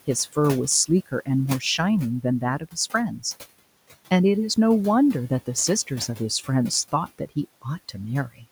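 From start to finish, noise suppressor artifacts shape the background: the room noise, about 20 dB below the speech, is pulled down by about 16 dB between phrases and swells back beneath them. A spectrogram shows noise bands gating in step with speech energy.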